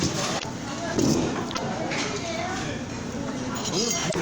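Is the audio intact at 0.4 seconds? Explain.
No, there's damaged data in the compressed stream from 0.35 to 0.44 s: the decoder loses sync on corrupted frames, heard as a brief chirp, squawk, click or short hole.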